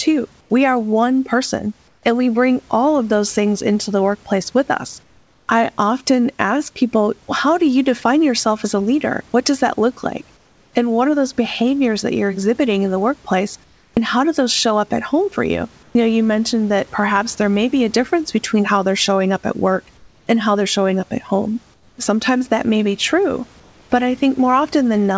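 Comfort noise replaces the background in five speech pauses: 0.41–2.03 s, 5.03–5.48 s, 10.37–10.73 s after "does that look like", 13.64–15.95 s after "exhibiting in the workplace", and 19.97–23.90 s before "but I". The likely cause is discontinuous transmission: the sender falls silent, and the receiver fills the gap with steady, featureless hiss. That hiss is about 4 dB lower in the second and third gaps. On a spectrogram, textured room noise turns into a smooth, uniform wash capped at 8 kHz, and the waveform's floor goes evenly flat.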